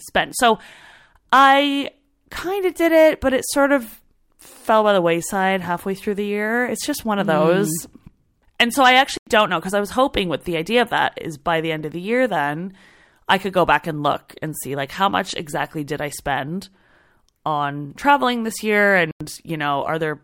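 Corrupt frame muted: the decoder rejected damaged compressed frames and silence replaced them, leaving abrupt 0.1 s holes, which fits two frames, at 9.17 s after "so I" and 19.11 s after "on traveling this year".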